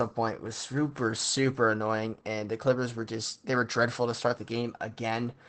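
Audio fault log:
throughout, Opus voice compression: the speech sounds muffled, hoarse and slightly robotic because the SILK linear-prediction coder, in wideband mode, codes the excitation coarsely, which fits about 12 kbps. A spectrogram shows a hard ceiling near 8.8 kHz and blurred, grainy harmonics.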